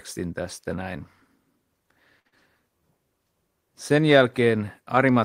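At 2.19 s a packet arrives late and the jitter buffer runs dry, a short stall from a late packet. The receiver holds the last sound for about 58 ms until it lands, then carries on with nothing lost, leaving a stretched sound with a slight buzz or dip and everything afterwards running 58 ms later.

Right after, from 2.27 to 2.34 s, a burst of packet loss removes about 60 ms of audio. The receiver fills roughly 49 ms by extending and fading the last sound, then jumps ahead, so the missing stretch is simply skipped.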